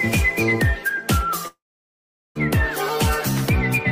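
At 1.47 s the sound turns into a brief fading buzz, then about 0.78 s of silence until 2.37 s, when audio resumes with that stretch missing. This is likely a long network dropout: the receiver briefly extends the last sound, then falls silent.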